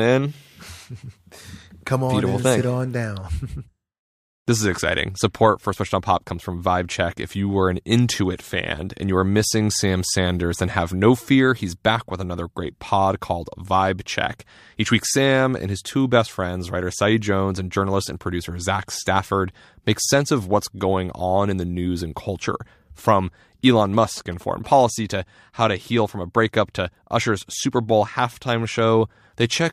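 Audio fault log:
23.85–24.90 s, GSM signalling bursts: a galloping dit-dit-dit of short 217 Hz buzzes, roughly 20 dB below the speech, ending just before "to how to heal". A nearby 2G phone signalling its network emits radio bursts that the audio circuitry rectifies into sound.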